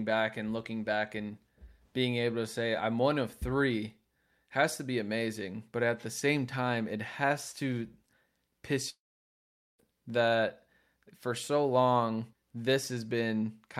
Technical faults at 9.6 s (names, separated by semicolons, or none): long network dropout